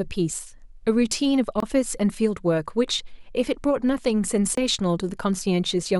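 At 1.60 to 1.63 s and again at 4.55 to 4.57 s, the speech drops into a block of digital silence about 23 ms long. The audio cut out, likely because the output buffer wasn't filled in time. That fits a 1024-sample buffer. Each gap starts and ends abruptly, with no fade.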